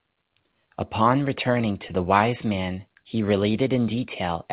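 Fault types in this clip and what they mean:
Scattered short gaps: between 1.44 and 2.31 s a handful of packets, around five, went missing or arrived too late, each hole small, the longest only about 15 ms. The receiver covered each one by stretching the preceding sound forward, so the speech stays clear but picks up brief ticks and tiny smears across that stretch, with concealment making up a small share of it, roughly 7 percent. Net timing shift is slight, about 18 ms added.
Jitter buffer slow-down: from 3.25 to 3.80 s the receiver's buffer was short on reserve, so it repeated single pitch periods back to back to gain time, adding 46 ms. That portion plays at 93 percent speed with the pitch unchanged, giving drawn-out sounds. The call path carries G.711 mu-law coding, which fits a narrowband 64 kbps link, with nothing above 4 kHz.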